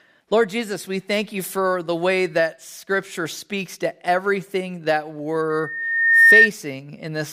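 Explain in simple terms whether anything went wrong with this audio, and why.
A high whistle swells into a squeal from 5.50 to 6.50 s, right after "speaks to everything that": loudspeaker feedback squeal, the microphone re-amplifying its own speaker until a 1.8 kHz tone runs away.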